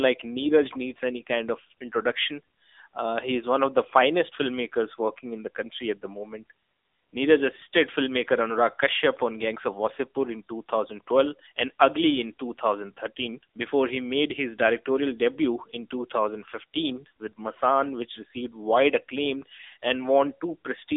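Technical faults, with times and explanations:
Throughout: AMR narrowband mobile codec. The speech is confined to a 300 Hz to 3.7 kHz line band with nothing above 3.8 kHz. Unlike a plain band-limiting filter, it also sounds plainly buzzy and synthetic from pulse-driven vocal-tract modelling, which fits a low rate near 7.95 kbps.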